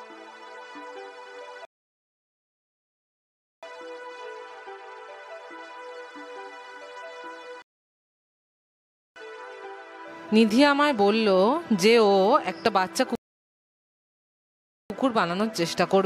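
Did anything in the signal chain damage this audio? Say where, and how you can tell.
Yes: rebuffering stalls at the playback stage. The player's buffer ran dry three times, at 1.65 to 3.63 s, 7.62 to 9.16 s and 13.15 to 14.90 s. Each silence of about 2.0, 1.5 and 1.7 s adds time, and the sound then resumes exactly where it stopped, with nothing lost.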